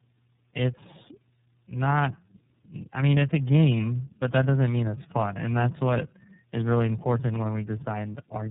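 Tandem speech coding runs through the whole recording. What you hear fits three low-rate speech codecs in a row, something like iLBC, then GSM full rate, then iLBC again, with plain G.711 hops in between. Each coder had to rework speech the previous one had already mangled, so the damage stacks. The result is rough, muffled and warbly, worse than any single link would give you, and nothing gets through above 3.8 kHz.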